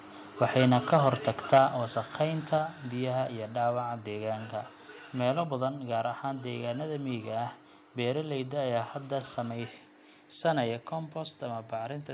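From 0.41 to 1.58 s the loudest syllables carry a harsh, crackly edge, the sound of microphone overload. The input was likely driven about 5 dB past the converter's ceiling, so the peak tops are flattened. Only around one percent of the samples are affected. Unlike the steady coding noise of the narrowband call path, which carries nothing above 4 kHz, this grit appears only on peaks and stops once they pass.

Right at that point, at 1.58 s, the level drops abruptly by about 4 dB. It drops again by about 4 dB at 2.58 s and by about 2 dB at 5.67 s. These are microphone volume step-downs, likely automatic gain control lowering the device input after the clipping. A compressor would pump and recover, and a fade would glide. Here each change is instant, and the voice and background fall together and stay down.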